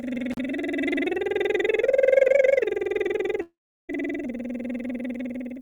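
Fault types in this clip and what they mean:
Intermittent contact: Near 0.32 to 0.38 s the music briefly cuts out with a crackle at each edge and faint hiss in the gap of about 36 ms. A loose plug or cable contact opened for that moment, then reconnected.
Long network dropout: From 3.41 to 3.91 s the music turns into a fading buzz-like continuation, then about 360 ms of silence, and resumes further on. Roughly half a second of audio likely never arrived and was never played.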